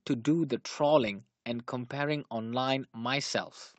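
No technical faults can be heard in this speech clip, which comes through a call codec path at its normal bandwidth.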